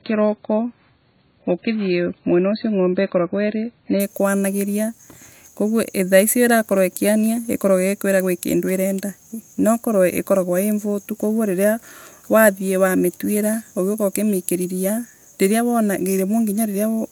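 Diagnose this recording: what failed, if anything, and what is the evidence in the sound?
Playback stage: an adaptive stream starting at a low bitrate. Until 4.0 s the speech is dull, with nothing above 4.5 kHz, then it jumps to better quality with no gap.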